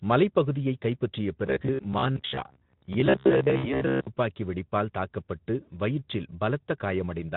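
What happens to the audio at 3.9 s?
At 3.9 s the sound is a rigid, metallic buzz fixed near 67 Hz: robotic sound from repeated short buffers, running from 1.47 s to 4.07 s, after "மலைப்பகுதியைக் கைப்பற்றிய" until "துப்பாக்கி வெடிப்பால் தாக்கப்பட்டு வயிற்றில்". The likely cause is audio arriving too seldom, so a roughly 15 ms chunk is replayed while about half the real audio is skipped. Just before, from 3.57 s to 3.82 s, a fading stretch of stretched-out sound marks VoIP packet loss concealed by the speech codec, which extrapolated over 60 ms of missing audio.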